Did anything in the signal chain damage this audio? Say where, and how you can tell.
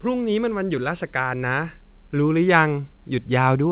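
No, nothing in the chain damaged this speech; the only trace of the WebRTC call path is the band ending at 4 kHz, which fits a narrowband G.711 A-law link at 64 kbps.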